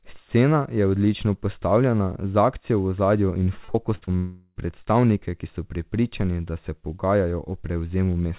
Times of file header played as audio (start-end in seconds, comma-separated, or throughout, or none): none